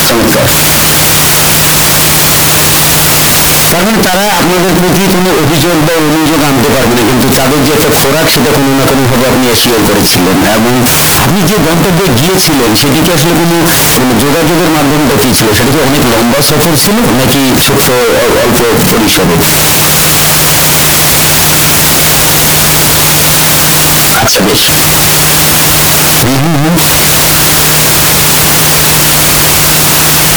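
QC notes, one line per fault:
Throughout: signed and unsigned mixed up, likely from 16-bit samples read with the wrong sign convention, so the top bit of every sample is flipped. Each time the speech waveform crosses zero, the value jumps from one extreme of the range to the other, giving very loud, harsh distortion where soft sounds are as loud as the strong ones. On a waveform the trace stays uniformly large, and a spectrogram shows dense broadband energy.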